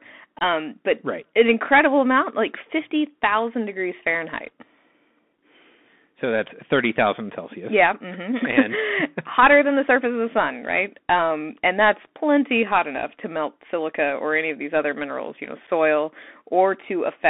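Speech carried over a Bluetooth CVSD headset codec for its full length. The audio is confined to a narrow telephone band of about 200 Hz to 3.5 kHz. The one-bit delta modulator's adaptive step cannot keep pace with loud high-frequency content, so s sounds turn scratchy and a granular hiss sits under the voice. Unconcealed Bluetooth headset packet loss opens abrupt gaps, with nothing filled in. The first runs from 0.39 to 0.43 s, just before "but right an incredible". Its 22.5 ms hole fits a few consecutive lost packets. The second, from 15.67 to 15.69 s, follows "other minerals you know". It is a brief 7.5 ms dropout consistent with a single lost packet.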